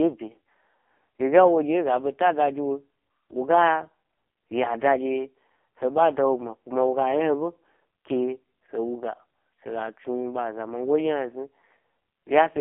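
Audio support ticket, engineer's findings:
AMR narrowband mobile codec, throughout: band-limited to 250 Hz to 3.4 kHz, heavily buzzy, synthetic speech from sparse pulse excitation, which fits the 5.15 kbps mode.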